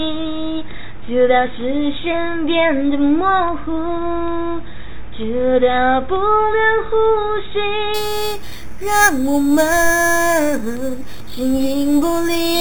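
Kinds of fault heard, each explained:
Imaging from sample-and-hold upsampling: from 7.94 s to the end, a bright metallic fizz, about 13 dB down, tracks the sound between 4 and 8 kHz. Samples were repeated unsmoothed, which fits an 8 kHz source raised to 48 kHz, leaving mirrored spectrum copies.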